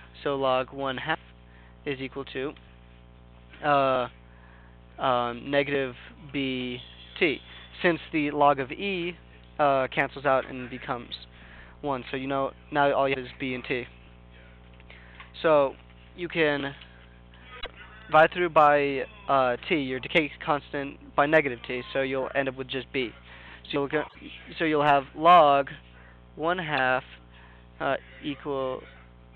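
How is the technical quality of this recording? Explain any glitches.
Four short glitches break up the audio, all from damaged data in a compressed stream: at 13.10 to 13.16 s, 17.57 to 17.67 s, 24.05 to 24.16 s, and a brief blip at 26.77 s. Corrupted bytes make the decoder misread frames and lose sync, giving chirps, squawks, clicks or short holes that show as broadband smears on a spectrogram.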